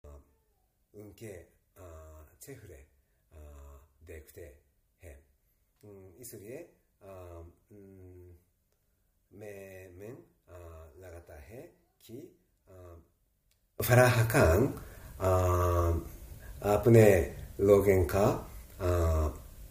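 From 0.0 to 13.8 s, one channel is likely inverted in polarity, so material common to both channels cancels when they combine. The sound drops by about 24 dB, losing its centre, and leaves only a faint difference signal.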